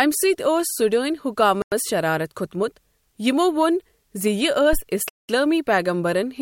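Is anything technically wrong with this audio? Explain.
Yes, the speech is interrupted by three faults.

Bluetooth stalls at 1.62 to 1.72 s and 5.09 to 5.29 s: the audio drops to silence for about 0.1 s and then 0.2 s before resuming. The likely cause is radio interference delaying packets until the headphone buffer emptied.

Phantom power thump at 4.73 to 4.80 s: a supply switched on or off on a live input sent a voltage step through the coupling capacitors, producing a deep thump that dies away within about 15 ms.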